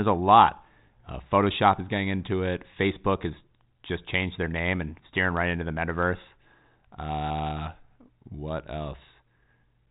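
No faults can be heard anywhere in this speech.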